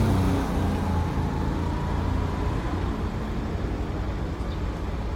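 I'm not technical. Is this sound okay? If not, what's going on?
No. From start to finish it sounds swirly, hollow and smeared, with soft attacks. This is generation loss, likely from being compressed and re-saved about seven times.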